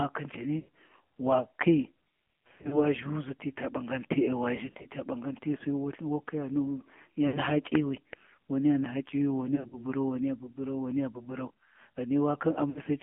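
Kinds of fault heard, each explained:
AMR narrowband mobile codec: The speech is squeezed into a 200 Hz to 3.4 kHz telephone band, with nothing above 4 kHz. A vocal-tract model rebuilds the voice from sparse pulses, and the plainly buzzy, synthetic texture fits the low 7.4 kbps mode.
Lost AMR speech frames: The decoder bridged damaged frames by repeating the last pitch and filter settings at falling gain. Brief dips and warbles occur at 0.60, 2.48–2.85, 4.56–4.87, 7.28, 9.56–9.76 and 12.70 s. The gaps run 60 to 140 ms, with the longer ones scattered in short bursts.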